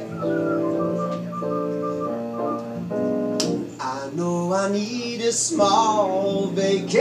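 No technical faults occur anywhere in the clip, so there is nothing to describe in time order.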